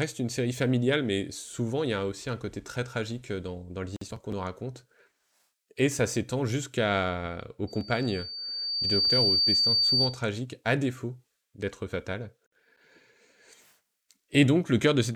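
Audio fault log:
7.67–10.23 s, loudspeaker feedback squeal: a piercing tone near 4.6 kHz swells over roughly a second and a half to sit about 5 dB above the speech, then cuts off just before "à défaut d'être fatal". The microphone was re-amplifying its own loudspeaker, with loop gain above one at that frequency.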